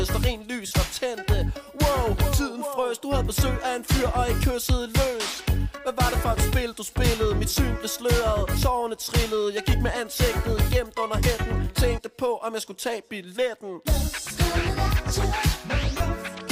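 At 0.66 s there's a brief smear lasting 45 ms, and another near the end at 15.97 s, lasting 30 ms. Both are lost LE Audio frames: the Bluetooth link dropped packets, and the LC3 decoder patched the gaps by repeating the last spectrum with scrambled signs, so tonal content turns into a short hiss-like blur. The gap lengths fit runs of 7.5 ms frames. The light codec coding underneath stays faint.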